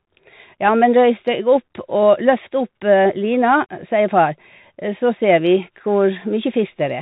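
From start to finish the speech carries the sound of a Bluetooth CVSD headset codec, consistent with the 64 kbps link. Nothing above 4 kHz survives, the adaptive one-bit steps can't keep up with loud bright moments, so s sounds turn scratchy, and a grainy hiss sits underneath.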